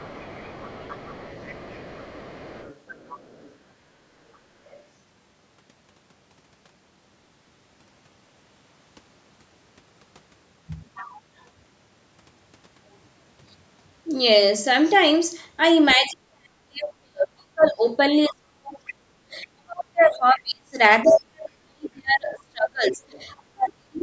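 From 0.0 to 3.55 s a second voice sits faintly under the speech, about 25 dB down. This is the other side's voice leaking through. The talker's loudspeaker output reaches the microphone, and the echo canceller likely fails to remove all of it. A shorter scrap follows at 4.65 to 4.83 s, quieter still, near 35 dB below the speech.

From 15.96 s to the end at 24 s, the speech is suppressed in double talk. Both sides seem to talk at once. The canceller likely cannot tell its own talker from the echo, so it pulls the level down. For about seven seconds in total the voice dips and breaks up, falling by as much as 40 dB. Leaked scraps of the other side surface inside this stretch at 17.61 to 17.71 s, 18.87 to 19.44 s, 21.06 to 21.22 s and 23.12 to 23.23 s. The one at 21.06 s is loudest, only about 15 dB under the speech.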